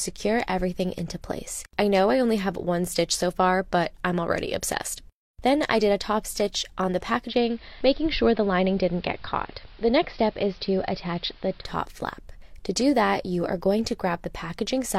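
Digital radio blending to analogue runs from 7.25 to 11.67 s. The receiver lost its digital stream and cross-faded in 104 ms to AM, so hiss sits around 30 dB below the sound, and level drops about 1 dB.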